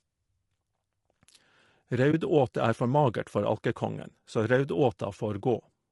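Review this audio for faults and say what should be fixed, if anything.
Low-delay AAC compression, throughout: the speech sounds rough and grainy, with noise between the harmonics, likely from AAC-ELD's short frames at a bitrate around 32 kbps.

AAC frame loss with muting, 2.11 to 2.14 s: a brief dip of about 20 ms, fitting one lost frame zeroed and faded by the overlapping windows.

Raising the bitrate and adding packet-loss concealment or redundancy on the transport would prevent both.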